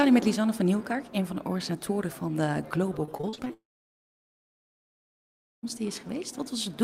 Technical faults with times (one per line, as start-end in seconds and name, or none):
3.05-3.51 repeated packet loss (robotic sound)
3.53-5.65 long network dropout